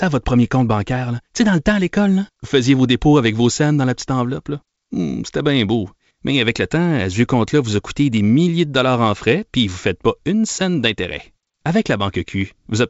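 No audible faults in this speech.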